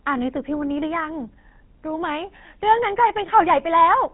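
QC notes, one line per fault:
throughout: GSM full-rate codec, plainly buzzy, gravelly speech with nothing above 4 kHz, from sparse pulse-excited vocal-tract modelling consistent with 13 kbit/s GSM coding.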